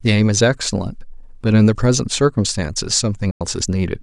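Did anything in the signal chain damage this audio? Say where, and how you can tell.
Yes: a digital broadcast dropout at the receiver. At 3.31 s the speech fades out within 3 ms and stays silent until 3.41 s, consistent with about three failed frames muted.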